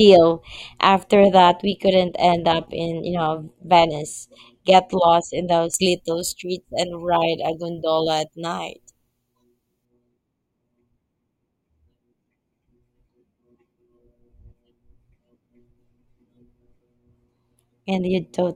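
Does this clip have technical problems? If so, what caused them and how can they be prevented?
Yes. Pre-emphasis left on affects the speech from 5.74 to 9.85 s. The treble was lifted before recording or transmission and the matching de-emphasis cut was never applied on playback, so high frequencies stand about 14 dB above the 1 kHz level at 10 kHz. That slope fits a 75 µs FM emphasis curve, and it makes this stretch sound thin, overly bright and sharply sibilant. To prevent it, always pair pre-emphasis with the matching de-emphasis at the receiving or playback end, and confirm the setting on both sides.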